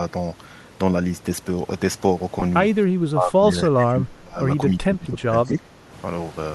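At 2.40 to 2.42 s, about 20 ms of sound is lost in transmission. These are lost LE Audio frames, and the gap fits two 10 ms frames. The LC3 decoder had nothing new to play. It repeated the last spectrum with randomised signs. The result is a brief grainy smear in place of clean sound. The gap is too short for the fade toward silence to set in. Around it, the light LC3 coding likely adds only a faint breathy edge.

From 2.89 to 4.40 s, the level dips hard and unevenly. The deepest drops are around 20 dB. The likely cause is speech suppressed in double talk. Both ends were talking at once. The echo canceller could not tell the local talker from the loudspeaker echo. So it turned everything down. The talker sounds pushed back. The same pumping returns from 4.70 to 5.90 s, again reaching roughly 20 dB down.

Inside that second stretch, at 5.44 to 5.48 s, a faint delayed copy of the sound slips through. 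It trails the original by 274 ms and sits at about 35 dB below it. This is likely an echo leak. The far end plays the call over a loudspeaker. Its echo canceller missed part of what its microphone picked up. That residue came back down the line as a brief ghost.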